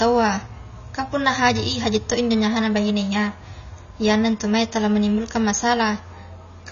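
From start to finish the speech has no content above 6.9 kHz and carries plainly audible codec damage, most likely AAC compression at a low bitrate. A lean bitrate budget forces the encoder to drop the top band entirely and to quantise the remaining frequency lines coarsely, so sibilants turn fizzy and sustained sounds warble. The overall result is dull and smeared, consistent with AAC-LC running at around 24 kbps.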